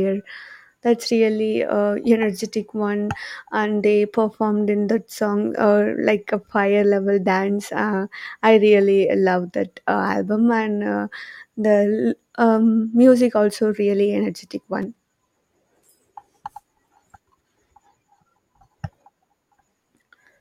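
At 14.82 s the speech has a repeated buffer: new audio arrived late, so a piece about 5 ms long played twice more, which points to a very small buffer. It sounds like a tiny buzzy click rather than a dropout's silent gap, and about 10 ms of real audio is lost.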